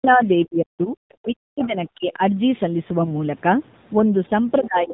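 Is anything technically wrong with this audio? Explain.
Yes, there are several problems.

Throughout, the speech carries AMR narrowband mobile codec damage, which fits a low mode around 7.4 kbps. The codec rebuilds the voice from a vocal-tract model and sparse pulses, so it sounds buzzy and synthetic. On a spectrogram, energy stops in a hard ceiling at 4 kHz.

From 0 to 0.22 s and again from 1.21 to 2.22 s, the speech is suppressed, likely from double talk. An echo canceller that cannot separate the talker from the loudspeaker echo turns the signal down. The first dip is about 15 dB. In the second, the level drops in pieces by up to about 40 dB. On a waveform, these show as sudden hollows in the envelope.

Between 1.62 and 1.67 s, a faint second voice comes through, likely the other side's voice leaking past the echo canceller. It sits about 20 dB below the speech. On a spectrogram, it appears as a weak, separate harmonic trace inside the suppressed gap.

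From 2.98 to 3.13 s, AMR bit errors corrupt several frames. The pulses and the fine spectral values are decoded wrongly, so the voice keeps roughly its pitch and level but turns hoarse and gargly. On a spectrogram, the harmonics smear into noisy, ragged texture there.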